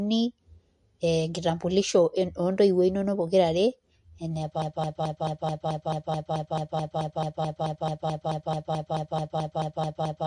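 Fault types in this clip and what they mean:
MP3 compression: The whole clip has that watery, swirly quality you get when a perceptual coder is starved of bits, with sibilants going a bit metallic and chirpy and consonant attacks smeared. There's nothing above about 11.3 kHz, which is the encoder chopping the treble to save bits. The damage is plainly audible, and the likely cause is MP3 encoding at a low rate, something around 45 kbps.
broken-record loop: From 4.62 s right through to the end, a single fragment about 217 ms long just repeats back to back, exactly the same each time, roughly 26 times over. What's happening is that the player or stream stalled and kept resending the last chunk it had, so whatever should have played in those last five-odd seconds is simply gone. That's the likely cause of the stutter.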